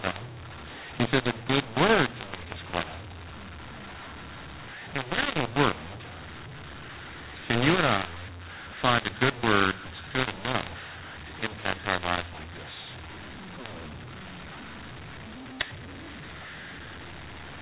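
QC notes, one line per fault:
Throughout: mu-law and A-law mixed up. A-law telephone samples are decoded as mu-law, which scrambles the levels, leaving the speech harsh and distorted and filling the pauses with noise.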